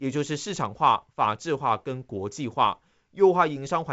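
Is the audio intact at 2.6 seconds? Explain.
Yes, the speech at 2.6 seconds is intact, carried by G.722 wideband telephone coding at 64 kbit/s, which leaves nothing above about 7.7 kHz.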